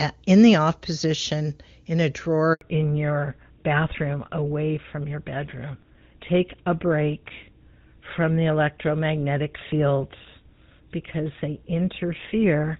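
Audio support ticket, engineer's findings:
Handover gap at 2.53 to 2.61 s. Sound cuts out for 80 ms. Probable component: network handover. No speech frames delivered during the network switch. Audio fades within tens of milliseconds and stays silent until the new link starts. Content in the gap is lost.

Fallback to narrowband from 2.61 s to the end. Nothing audible above 4 kHz. Sound turns duller and rougher. Before the gap, clean HD Voice (AMR-WB), consistent with its top rate. Afterwards the codec behaves like GSM full rate.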